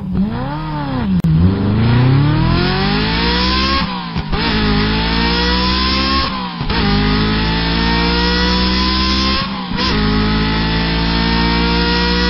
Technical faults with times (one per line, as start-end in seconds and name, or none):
1.20-1.24 gap at a join of encoded pieces